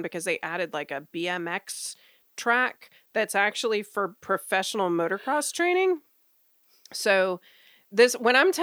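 No technical faults can be heard anywhere in the speech recording.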